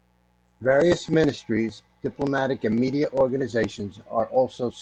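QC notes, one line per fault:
Throughout, mains buzz: a steady, raspy buzz sits under the speech for the whole clip, quiet at roughly 40 dB below the signal. Its rasp comes from sharp switching spikes arriving twice per cycle of 60 Hz mains, so energy spreads across a long ladder of harmonics up into the kilohertz range. That bright, edgy texture separates it from plain mains hum, which is a smooth, low drone concentrated at the fundamental and first few harmonics.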